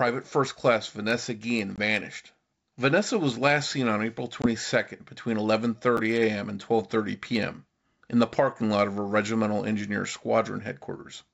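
At 1.76 to 1.79 s and again at 4.42 to 4.47 s, packet loss on an ADPCM call drops about one packet's worth, 20 ms, into hard-edged silence. The decoder's adaptive predictor and step size lose track of the sender's, so speech resumes slightly distorted before settling.

At 5.97 to 6.00 s, chunks out of order: a 10.67 ms chunk plays one chunk late, after audio that should follow it. Nothing is missing, but the swapped order creates three abrupt joins, heard as a short jumbled moment over the G.722 wideband speech.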